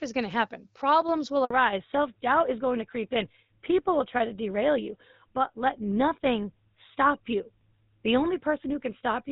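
At 1.45 s the call is handed from one network to another, and for 60 ms, until 1.5 s, no speech frames reach the receiver. A handover gap like this shows up as a quick fade of the sound into silence. Whatever was said in that window is simply missing, and the sound picks up again only once the new link begins delivering frames.

From 1.5 s onward the new link carries the call on an older codec. This fallback to narrowband shows in the spectrum: before the switch the sound has the clear, slightly airy character of AMR wideband (HD Voice), consistent with a rate around 12.65 kbit/s with only light coding wear. After it, nothing remains above 4 kHz. That cut-off points to GSM full rate at 13 kbit/s, and it makes the speech sound duller, boxier and rougher for the remainder.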